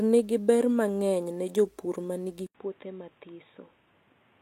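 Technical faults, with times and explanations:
2.47–4.41 s, input switched to a poorer device: after "mangeny ne jopur manigi" comes an 80 ms silence, then duller, boxier speech about 10 dB quieter over new noise about 30 dB down, likely a narrower-band microphone. Spectrogram: flat ceiling at 3.8 kHz. Waveform: gap, then smaller envelope.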